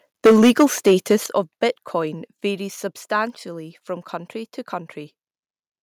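From 0.25 s to 1.14 s the speech carries a harsh, crackling edge on its loudest syllables: microphone overload. The peaks run about 14 dB past what the converter can represent, so their tops are flattened, and roughly a tenth of the waveform sits pinned at the limit. The likely cause is input volume set too high at the microphone. The distortion rides on peaks rather than sitting under the whole signal as steady buzz or noise would, which sets it apart from a faulty cable or a noisy preamp.

At 0.27 s, just inside that distorted stretch, the level drops by about 4 dB in a single step, and at 1.26 s it drops again by about 8 dB. This is microphone volume stepped down, likely the call software reacting to the clipping by lowering the device's input volume. Voice and background fall together and at once, with no gradual slope. That separates it from a compressor or automatic gain control, which would ease the level down and pump back up between phrases.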